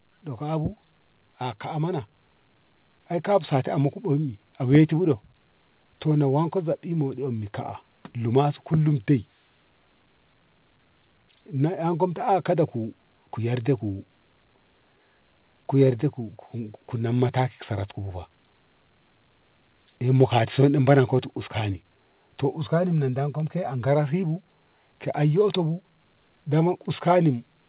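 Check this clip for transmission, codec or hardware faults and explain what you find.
One fault stands out, at the start of the speech, on top of a call path whose top end stops at 4 kHz, which fits a narrowband telephone codec such as G.711 A-law.

Automatic gain rising, from 0.20 s to 7.61 s: the automatic gain control judged the incoming level too low and raised its gain slowly over about seven seconds, by about 7 dB in total. Since the gain acts on the whole signal, the voice and the background noise swell together in a gradual climb. The opening lines therefore start quiet and grow louder.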